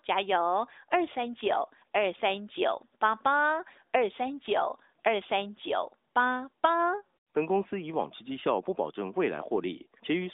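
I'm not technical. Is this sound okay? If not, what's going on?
Yes, this recording is technically fine: it carries the ordinary sound of a mobile phone call, with the narrower, telephone-like range of a standard AMR narrowband mobile connection, and nothing in it has gone wrong.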